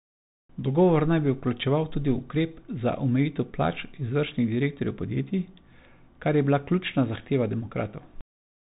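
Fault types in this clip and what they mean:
Bluetooth CVSD headset codec: a one-bit delta coder, fitting a 64 kbps headset link, whose adaptive step lags fast changes. The speech is cut off above about 3.8 kHz, a flat ceiling on a spectrogram, with scratchy s sounds and granular hiss lying under the speech.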